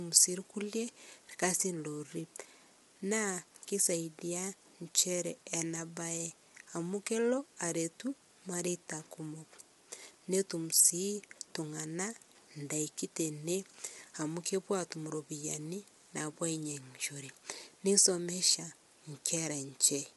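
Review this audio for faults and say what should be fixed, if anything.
Throughout the clip the speech sounds rough and grainy, with a hiss filling the gaps between pitch harmonics and nothing at all above 11.6 kHz. This is likely low-delay AAC compression (AAC-ELD): its short frames resolve harmonics coarsely, and the plainly audible damage fits a rate near 32 kbps. Unlike a simple low-pass filter, which would leave the remaining band clean, this roughness sits inside the voice itself. Raising the codec bitrate, or recording locally instead of from the call stream, would prevent it.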